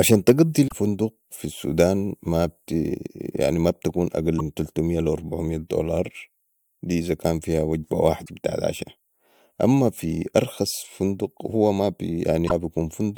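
At 0.67 to 0.72 s, 8.22 to 8.30 s and 12.45 to 12.52 s, the speech breaks into a brief chirp or squawk. This is damaged data in a compressed stream. Corrupted bytes make the decoder misread frames and lose sync until it finds the next valid header.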